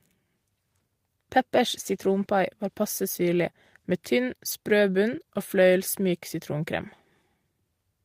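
At 4.51 to 4.53 s, between "passe syrlig med tynn" and "sprø bunn", there is a lost packet rebuilt from error correction. About 20 ms of speech, which fits a single lost packet, was filled from a low-bitrate copy carried in the next packet. There is no gap, but that short stretch sounds rougher and noisier.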